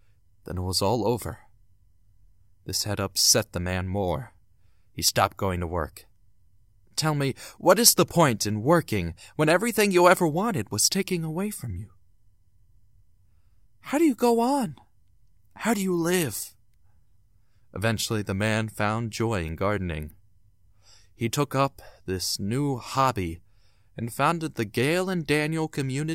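From 0.15 s to 26.1 s, clock slip clicks tick roughly every 70 ms, likely single samples slipping between free-running clocks about 300 ppm apart.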